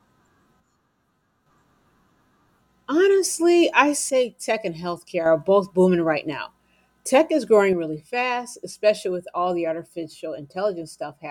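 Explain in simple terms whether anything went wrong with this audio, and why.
The speech abruptly drops to a quieter level from 0.6 to 1.46 s, from 4.10 to 5.26 s just before "are both booming right", and from 7.73 s after "is growing" to the end. The likely cause is one channel dropping out, so the mix loses half its signal.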